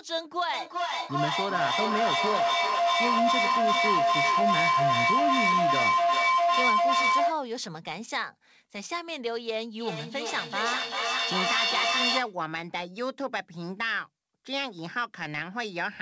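Feedback howl from 0.53 to 7.48 s: two devices in the same room share the call, and sound loops from one microphone through the other loudspeaker and back, gaining level on every pass. Instead of dying away, the repeats swell and narrow to a tone near 1 kHz, with a loop delay of roughly 0.4 s. The howl peaks about 7 dB above the speech and stops only when the loop breaks.

Feedback echo between two devices from 9.8 to 12.39 s: the loop is active again, but below the point of runaway howl. One device plays what the other's microphone sent, and that microphone picks it up again. Each device's echo canceller removes only its own playback, so the sound returns at a steady interval of roughly 0.4 s, thinner and more ringing on each pass. The repeats reach about 4 dB above the speech. Throughout the clip the audio is band-limited to 8 kHz, which fits a wideband call codec such as G.722.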